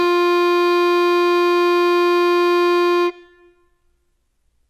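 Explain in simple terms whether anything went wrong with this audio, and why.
HE-AAC compression, likely, runs through the whole piece of music: the treble sounds bright but gritty and metallic, with nothing above 12 kHz. The codec keeps only the lower sounds and fakes the top end by copying them upward, so the high parts don't quite match.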